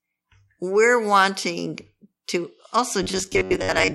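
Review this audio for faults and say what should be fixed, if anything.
New audio likely arrived too seldom from 3.03 s to the end at 3.94 s, so the player filled the gaps by looping its last buffer of about 10.7 ms for roughly half that stretch while the real audio was skipped. The result is robotic sound from repeated short buffers: the speech becomes a rigid, metallic buzz locked at 93.8 Hz. A larger playback buffer or a higher-priority audio thread should prevent these underruns.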